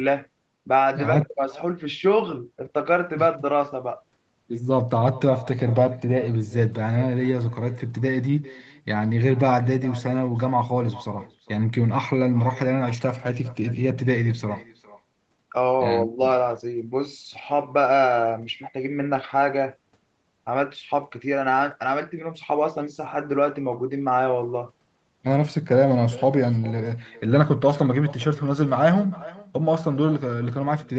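Echo with no canceller runs throughout this speech clip: each phrase returns roughly 0.4 s later, about 21 dB quieter, from a far-end loudspeaker feeding a microphone. The audio stops at 8 kHz.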